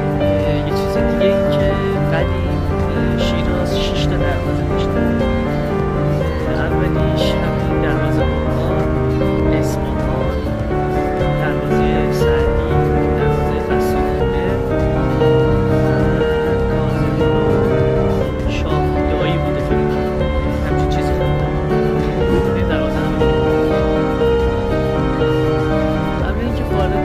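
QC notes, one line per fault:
No faults found; nothing to log.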